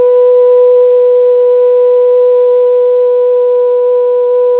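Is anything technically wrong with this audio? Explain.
No, nothing is technically wrong with this audio.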